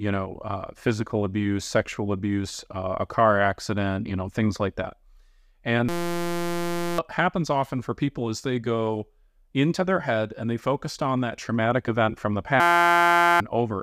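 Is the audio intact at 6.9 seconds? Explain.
No. At 6.9 seconds the clip is inside a system hang loop running from 5.89 to 6.98 s. The playback system stalled while the audio hardware kept replaying one 5.8 ms slice of its ring buffer, which fits a 256-sample buffer, nearly 200 times over. At that length the repetition fuses into a steady buzz at about 172 Hz. Roughly a second of real audio is lost before normal sound returns with "happens often for people".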